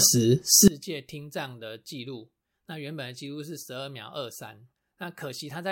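Likely one channel inverted from 0.68 s onward: reversed polarity cancels the shared speech in mono, leaving only a faint trace about 23 dB quieter.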